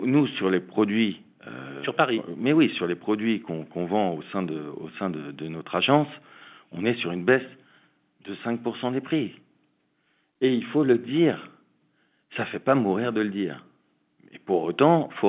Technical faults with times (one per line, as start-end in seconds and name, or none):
none